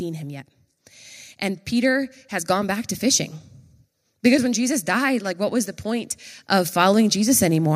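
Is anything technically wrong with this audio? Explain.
Yes. A DC offset runs through the whole speech clip: the waveform sits shifted off zero by a constant amount. It isn't audible as such, but it eats into headroom and appears as steady energy right at the bottom of the spectrum.

From 4.22 s to 7.71 s the automatic gain control is rising. Having judged the input too quiet, it raises its gain gradually, by about 7 dB, so the voice and the background noise swell up together over those three and a half seconds.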